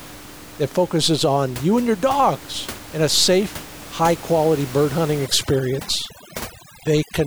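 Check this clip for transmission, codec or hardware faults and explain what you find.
One processing fault is present, near the end of the speech. From 5.26 s to 7.26 s, overdone noise removal sets in: an over-aggressive suppressor cuts any frequency band close to its noise estimate, so the background drops and breaks up into twinkling specks. Before that, the room noise sits about 17 dB below the speech.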